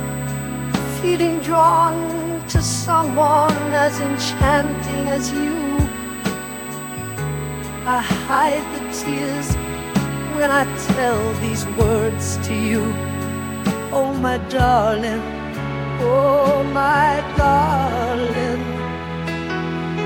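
From the start to 14.04 s a USB whine sits under the sound, a steady high-pitched tone at 8 kHz, strongest at its 16 kHz harmonic and roughly 15 dB below the programme. The current drawn in 125-microsecond USB microframes is leaking through power or ground. Unlike mains hum, which sits low at 50 or 60 Hz multiples, this whine is thin and piercing, and it falls silent after 14.04 s.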